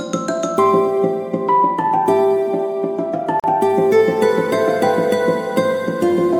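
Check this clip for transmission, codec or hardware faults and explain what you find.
One fault: a gap at a join of encoded pieces in the music, from 3.40 to 3.44 s. A silence of about 42 ms cuts into continuous sound. The pieces were encoded separately and butted together untrimmed, so one run's end padding and the next run's start-up delay both remain, and such gaps would recur every 6.0 s. It sounds like a brief dropout. The music resumes where it stopped. The waveform shows a flat stretch with smeared edges. The spectrogram shows a thin vertical blank band.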